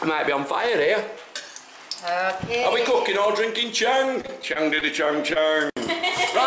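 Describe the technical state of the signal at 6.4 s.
At 6.4 s the audio is intact, carried through the G.722 call path with its usual band limit leaving nothing above 8 kHz.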